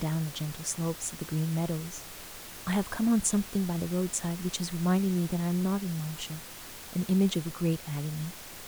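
No technical faults in this speech recording; the room noise sits about 15 dB below the speech and belongs to the recording itself.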